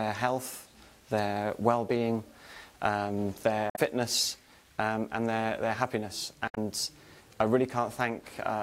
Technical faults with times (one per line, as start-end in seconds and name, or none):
3.67-3.79 damaged data in a compressed stream
6.46-6.58 damaged data in a compressed stream